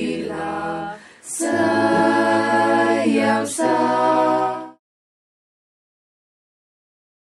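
No technical faults can be heard in this audio. Around 4 seconds the level begins a smooth fade-out that is complete by 4.8 s, with no click or hard edge.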